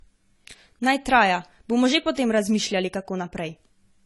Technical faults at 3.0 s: low-bitrate audio saved at a high bitrate

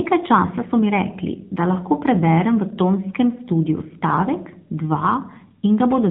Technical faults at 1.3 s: AMR narrowband mobile codec

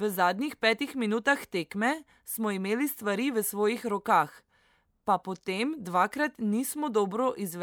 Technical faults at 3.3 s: none

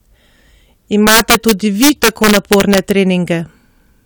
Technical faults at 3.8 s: none

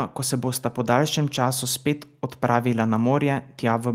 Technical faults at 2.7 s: none

